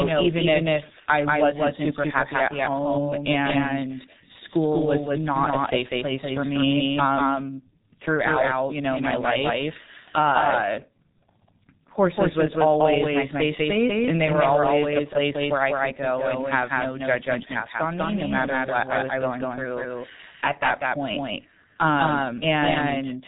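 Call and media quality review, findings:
Doubled audio track, whole clip: likely a second capture path or edit holding two copies out of step. Dry, full-band duplicate trails by roughly 200 ms at about equal level.

G.723.1 codec, whole clip: low-rate telephony coding, heavy damage consistent with about 6 kbit/s. Nothing above 3.8 kHz; speech muffled and hoarse, consonants smeared.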